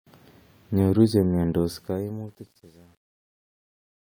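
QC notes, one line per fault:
1.62–4.04 s, truncation distortion on a fade: as the speech fades out, the tail turns gritty and grainy, and it is at its worst from 2.17 s to the end. The fade starts around 1.6 seconds, but the gain stage applying it drops low bits without dither. As the level approaches the smallest step, the waveform collapses into a few square steps, which fits a path keeping about 9 bits.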